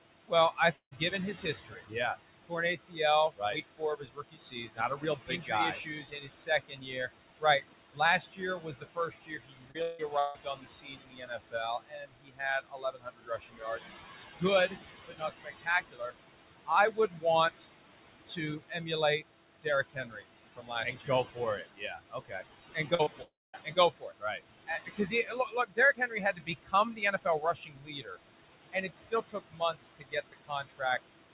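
Noise suppressor artifacts run through the whole recording. The room noise sits about 10 dB below the speech. Frame by frame, the suppressor pulls down the bands it judges to be steady noise, by about 19 dB. The background sinks in the pauses and swells back under the speech. On a spectrogram the noise floor looks patchy and pumping, with scattered isolated time-frequency specks instead of an even haze.

Speech cut by the noise suppressor starts at 0.28 s and continues to 13.80 s, affecting roughly 7 s of that stretch. At its deepest the suppressor turns the speech down by about 22 dB. Soft consonants, word endings and quieter phrases are mistaken for noise and attenuated along with the background, so they sound swallowed or faint. In the waveform, syllable tails collapse abruptly toward the floor. On the spectrogram, weak high-frequency fricative energy is missing or ragged.

The first long network dropout falls inside that stretch, from 0.76 to 0.94 s. 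About 0.16 s of audio likely never arrived. The receiver extends the last sound as a fading buzz or hiss for about 0.15 s, and roughly 0.1 s of near-silence follows before the audio resumes without the lost part. On the spectrogram this shows as a smeared, repeating band, then a blank gap.

A short concealed packet loss follows at 9.71 to 9.77 s. About 40 ms failed to reach the decoder in time and was filled by continuing the preceding sound before blending back. It is heard as a brief smear or wobble. On a spectrogram it appears as a short, overly uniform patch where the harmonics stop evolving.

Two more dropouts come close together, at 9.82 to 10.02 s and 10.19 to 10.38 s. In each, about 0.16 s was likely lost, and the whole gap is covered by synthetic continuation with no silence. Each gap is heard as a fading buzz or hiss in place of the real sound. On the spectrogram it shows as flat, stretched harmonic bands with a dimmed envelope.

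Two further speech cuts by the noise suppressor span 14.40 to 17.66 s and 18.26 to 28.17 s. They affect about 1 s and about 4 s respectively, with drops of about 21 dB.

Inside the second of those, short concealed packet losses land at 22.95 to 23.02 s and 23.03 to 23.09 s. Each covers about 40 ms and is heard as a quick wobble in the audio.

The longest dropout follows, from 23.22 to 23.56 s, with about 0.32 s likely missing. Concealment fills it with a fading buzz or hiss, and about 0.22 s of near-silence follows. In the waveform the envelope decays into a flat gap before the audio resumes.

A last speech cut, from 28.72 to 30.99 s, affects about 1 s, again with a drop of about 21 dB.

Throughout, the spectrogram shows nothing above 4 kHz. This band limit points to a narrowband G.711 A-law call codec.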